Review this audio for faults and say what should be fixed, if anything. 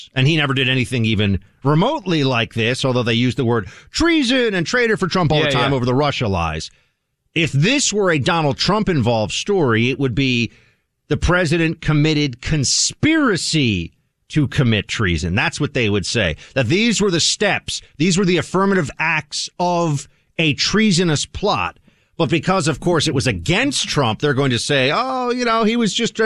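Nothing stood out on listening to this speech recording, so there is nothing here that calls for a fix.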